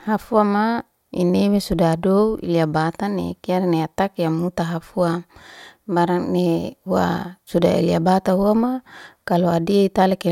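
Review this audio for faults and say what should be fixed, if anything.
No faults were heard, so nothing needs fixing.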